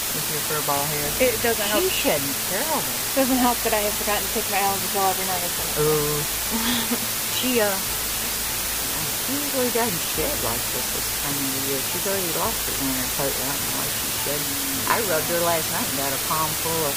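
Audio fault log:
Throughout: low bit depth with dither. The audio is carried on only 4 bits, so each sample is rounded to one of very few levels. Dither added before that rounding turns the rounding error into a constant, even hiss across the whole band instead of distortion tied to the sound. With so few bits that hiss sits within a few decibels of the wanted signal, and it stays at the same level whether the sound is loud or quiet.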